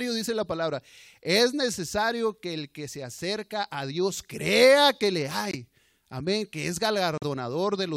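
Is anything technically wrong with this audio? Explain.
Yes. The speech drops out twice into abrupt silence: at 5.50 s for about 0.05 s, right after "crea que le", and at 7.18 s for about 0.06 s, after "que es". Each hole begins suddenly, and the speech resumes on schedule. This is a corrupt frame muted fault. Flipped bits made the decoder reject a few compressed frames, and the player filled the gap with silence of the same length, so timing is kept.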